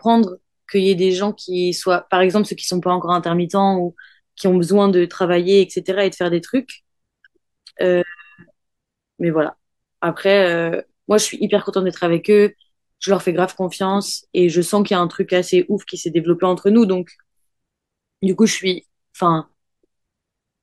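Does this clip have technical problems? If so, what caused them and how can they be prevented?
No, nothing in this speech recording stood out as a technical problem on listening, so there is nothing here that needs a cause or a preventive fix.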